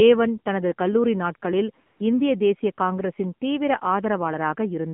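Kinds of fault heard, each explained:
AMR narrowband mobile codec: A low-rate phone codec, consistent with a mode near 7.4 kbps, models the voice from a few pulses, leaving speech plainly buzzy, synthetic and confined to about 150 Hz to 3.5 kHz.
AMR comfort noise: Speech frames stopped for 140 ms and the receiver filled the gap, from 1.86 to 2.00 s, with smooth synthetic noise instead of the real signal.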